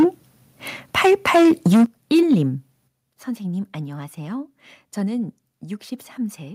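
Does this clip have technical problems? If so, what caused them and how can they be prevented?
Yes. Microphone overload causes harsh, crackling peaks at 0.0 to 0.05 s, 0.97 to 1.84 s and 2.14 to 2.34 s. The tops are flattened, likely because input level ran about 2 to 10 dB past the converter's limit. Set lower input gain beforehand.

The microphone volume stepped down suddenly at 1.86 s, by about 10 dB, and again at 2.88 s, by about 9 dB. Sound and background both drop. This is likely the call software cutting input after distorted peaks. A correct initial gain prevents it.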